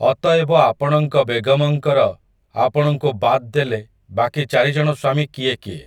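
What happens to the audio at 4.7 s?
At 4.7 s the speech sounds rough and slightly doubled, as it does throughout, from channel delay (comb filtering): one channel lags by roughly 20 ms, and mono summing carves evenly spaced notches starting near 30 Hz.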